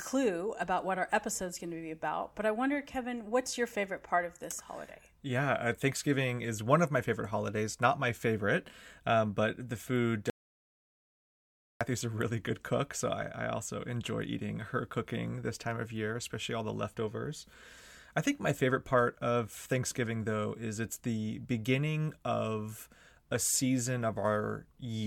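At 10.30 s the signal path most likely lost its input, through a dropped connection or a momentary mute, while the recorder kept writing zeros: an audio dropout to silence. Right after "um but the food" the speech cuts off abruptly into silence, with no room tone underneath, for about 1.5 s. It resumes mid-flow at 11.81 s with "a really good cook", and whatever was said in that gap is lost.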